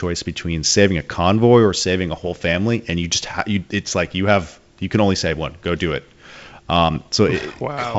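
Around 2.23 to 2.36 s and again at 6.95 to 7.08 s there are bit errors on an ADPCM link, a fraction of a percent of bits flipped, throwing off the decoder and leaving rough, poppy bursts.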